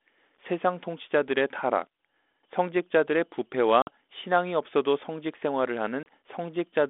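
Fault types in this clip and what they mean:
Packet loss on an ADPCM call: Stretches of the coded stream go missing and are replaced by silence, leaving hard-edged holes in the speech, one of about 50 ms at 3.82 s and a shorter one of about 30 ms at 6.03 s. Because ADPCM codes only differences from an adaptive prediction, the decoder's predictor and step size lose track of the sender's across each gap, so the speech comes back disturbed and takes some tens of milliseconds to settle.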